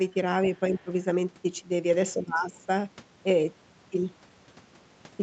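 A faint second voice sits under the speech from 0.47 to 0.6 s, about 20 dB below the talker, and returns more weakly, about 35 dB down, from 0.77 to 0.81 s. It is the other side's voice leaking through: the far end was likely playing on the talker's loudspeaker, reaching the microphone, and the echo canceller left scraps of it behind. Just after that leak begins, the talker's own level sinks, by around 15 dB at its deepest, across roughly 150 ms between 0.7 and 0.91 s. The same dip returns for a longer stretch of about 400 ms from 2.15 to 2.56 s. This is speech suppressed in double talk: with both sides likely talking at once, the canceller could not tell the talker from the loudspeaker echo and turned everything down. The audio stops at 8 kHz throughout, from the call's microphone processing and an Opus call path, whose coding texture points to a rate around 32 kbps.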